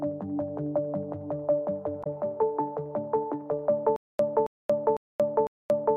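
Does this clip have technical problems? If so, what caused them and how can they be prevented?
Yes. At 2.0 to 2.07 s there is damaged data in a compressed stream: a brief glitch. Corrupted bytes made the decoder misread those frames, lose sync and hunt for the next valid frame header, discarding what lay between. Checksummed transfer and error-resilient containers prevent it.

From 3.96 s to the end there is a stutter with silent gaps. A 272 ms fragment repeats four times at a steady 502 ms pace, each followed by about 231 ms of digital silence, and the audio that should have played meanwhile never arrives. The likely cause is a stalled player or stream that replayed its last buffered chunk at each retry and then ran dry. A skipping or looping glitch would repeat without the dead-silent gaps. A larger playback buffer and reliable network delivery prevent it.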